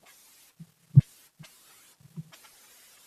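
The speech runs at twice its proper speed and sits a full octave high, 12 semitones up, giving a chipmunk-like, hurried quality from start to finish. This is audio read two samples at a time (double speed): the playback side treats each pair of samples as a single frame, as if the data held two channels or wider samples. Time is halved and pitch doubled, and any strong content above a quarter of the sample rate folds back into the audible band as aliasing.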